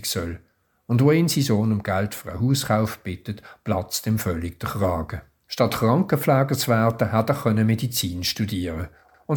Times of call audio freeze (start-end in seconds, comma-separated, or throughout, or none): none